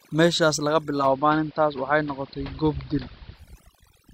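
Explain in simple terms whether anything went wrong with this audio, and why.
Yes, two things went wrong. The first runs through the whole clip: overdone noise removal. A noise reduction tool was pushed too hard, so it shut off bits of sound it mistook for background noise, taking quiet parts of the voice with them. That's why the background sits in an odd near-silence with little twinkly specks.

The second is digital radio blending to analogue, from 0.97 to 3.45 seconds. The radio lost its digital signal and faded over to the ordinary AM broadcast of the same station, then faded back. Each switch takes about a tenth of a second. During that stretch the sound turns duller, the level shifts very slightly, and a faint hiss creeps in well underneath the voice.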